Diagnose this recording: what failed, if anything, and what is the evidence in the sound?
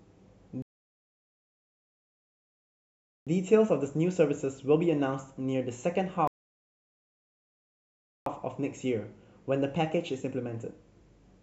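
Playback rebuffering stall, at the network-to-player stage: the speech drops to silence from 0.62 to 3.27 s and from 6.27 to 8.26 s, adding about 2.6 s and 2.0 s. The player's buffer drained and waited for data, then resumed exactly where it stopped. The waveform shows flat silence, and the spectrogram shows blank columns.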